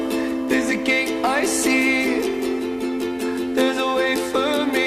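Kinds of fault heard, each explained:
Nothing stood out on listening to the audio.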